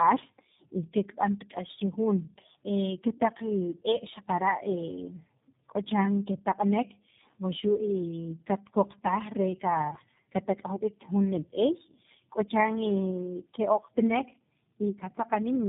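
Throughout, the speech shows tandem speech coding. Its compounded roughness, muffling and warble exceed what any single coder leaves, pointing to three speech codecs in a row, each re-encoding the last one's errors. Nothing sounds above 3.8 kHz.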